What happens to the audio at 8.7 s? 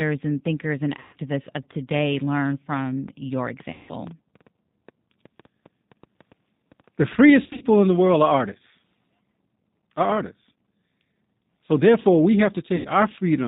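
The whole clip runs through the G.729 codec, and 8.7 s is no exception. The sound suggests a low-rate codec of about 8 kbit/s that models the voice as a vocal tract filter, a pitch predictor and a few pulses per 10 ms frame instead of sending the waveform. Nothing above 4 kHz survives, so the speech is muffled and the damage is plainly audible as a rough, synthetic quality.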